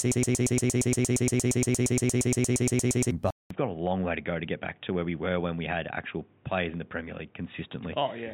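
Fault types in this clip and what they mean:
Broken-record loop: The clip opens already stuck. A slice of about 116 ms plays over and over, back to back, roughly 26 times, until 3.11 s. It's the kind of thing you get when a player or stream stalls and keeps resending the last chunk it had. That's the likely cause here. Whatever speech belonged in those three seconds never arrives, and you just hear that stutter.
Input switched to a poorer device: At 3.30 s the sound drops out for about 200 ms. It comes back duller and boxier, with nothing above 3.8 kHz and the level down about 5 dB. There's also a new noise floor roughly 35 dB under the speech. That pattern points to the input likely flipping to a lesser mic or a headset's call profile. The narrow band and changed tone stay for the rest of the clip.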